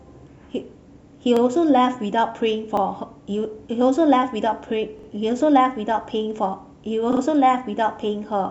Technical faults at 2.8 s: repeated buffer

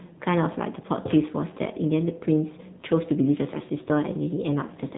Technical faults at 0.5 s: AMR narrowband mobile codec

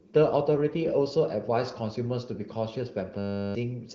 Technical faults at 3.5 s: system hang loop

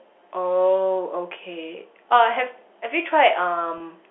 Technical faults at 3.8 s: packet loss with pitch repetition

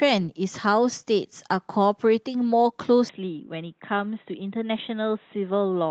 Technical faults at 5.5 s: input switched to a poorer device

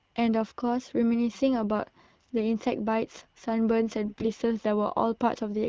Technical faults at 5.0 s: none

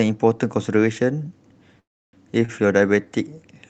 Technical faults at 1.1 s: none

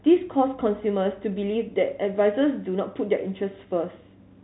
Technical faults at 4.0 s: none

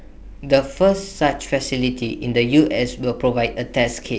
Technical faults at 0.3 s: none

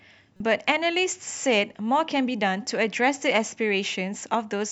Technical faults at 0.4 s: damaged data in a compressed stream

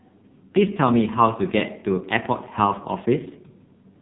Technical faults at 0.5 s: AMR narrowband mobile codec

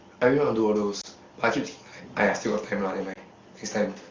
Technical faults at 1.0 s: lost AMR speech frames

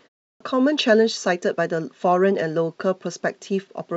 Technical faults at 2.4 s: none

